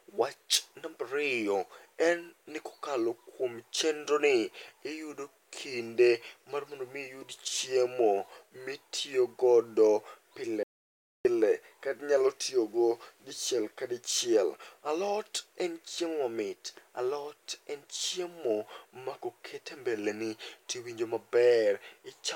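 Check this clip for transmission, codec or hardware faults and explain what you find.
There's one clear fault here, an audio dropout to silence running from 10.63 to 11.25 s, so roughly 0.62 s of the speech is simply gone. The signal cuts off mid-flow and drops to silence, with no room tone underneath, then snaps straight back in. The likely cause is the input being lost briefly, through a loose connection, a link hiccup or an accidental mute, while the recorder kept writing zeros.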